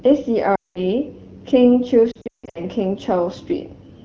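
Speech coded with AMR wideband, at light codec damage consistent with 12.65 kbit/s, suffers lost AMR speech frames twice. Radio errors corrupt frames, so the decoder repeats its last good pitch and vocal-tract settings at falling gain. From 0.55 to 0.83 s about 200 ms is lost, and the sound drops to near silence within two frames. From 2.11 to 2.60 s, 320 ms of losses are scattered over 440 ms, with the longest run 160 ms, giving warbling dropouts before the voice returns weak or rough.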